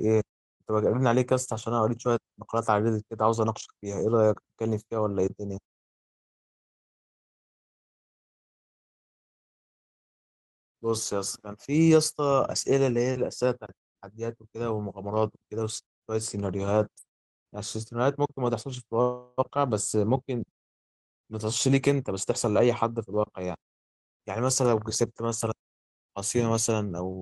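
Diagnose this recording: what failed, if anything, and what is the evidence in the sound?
From 19.01 to 19.40 s the speech stops and the last sound is stretched into a fading buzz or hiss lasting about 0.36 s. When it resumes, it picks up exactly where it stopped, with nothing dropped. This points to the network stage: packets were likely held up in transit and the jitter buffer ran dry. The receiver filled the wait by extending the final sound, a call audio freeze. Because nothing was discarded, playback now sits about 363 ms later than before.

Between 21.99 and 23.17 s the speech sounds hurried, running at about 108% of its normal rate while the pitch stays unchanged. This is a jitter buffer speed-up, at the buffer stage of the call. The buffer held more audio than its target. To shrink the excess, the receiver cut out many short pitch-period slices in quick succession, removing about a tenth of a second in total. 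The fading of background noise in the pauses is ordinary call-processing muting.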